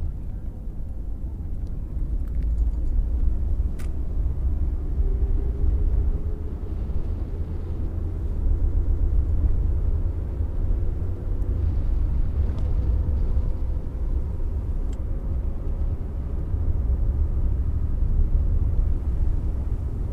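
A run of compressed frames was written repeatedly, so the decoder replays it. This is heard as repeated frames: from 8.58 to 9.11 s a 130.6 ms block, which fits five frames, stutters four extra times, adding 0.52 s. From 17.67 to 17.91 s a 78.4 ms block, which fits three frames, repeats three more times, adding 0.24 s.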